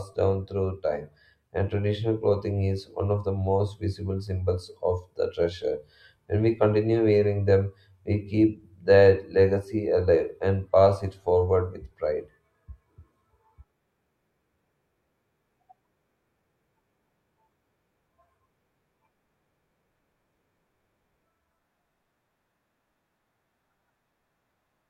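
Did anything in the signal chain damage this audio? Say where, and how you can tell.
No, nothing in the signal chain damaged this audio.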